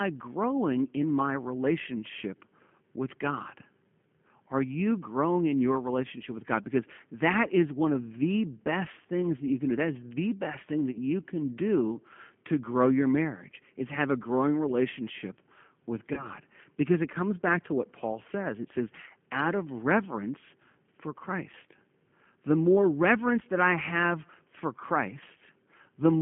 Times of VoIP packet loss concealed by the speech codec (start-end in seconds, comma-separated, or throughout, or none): 10.91-10.99, 16.14-16.28